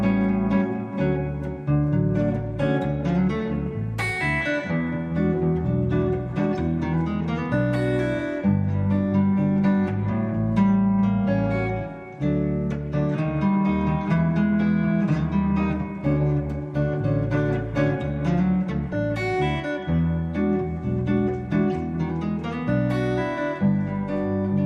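DAB burbling appears at 3.66 s and again from 18.87 to 18.93 s. Bit errors from weak reception slipped past error correction and corrupted the MP2 data, which fits a low error rate. Wrong samples put short blips of noise in single sub-bands. Each burst is brief.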